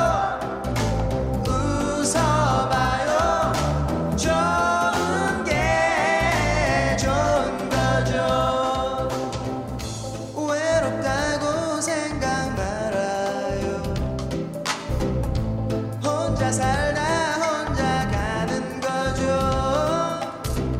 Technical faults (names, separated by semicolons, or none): none